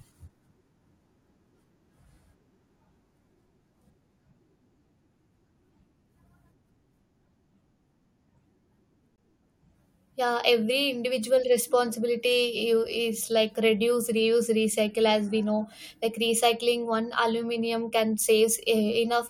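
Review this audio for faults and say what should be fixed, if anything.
There's a gap between stream segments at 9.16 s: a hard-edged hole of about 19 ms where two segment timestamps don't meet, which fits 4-second segments. Fix it by aligning segment timestamps so each one starts exactly where the previous ended.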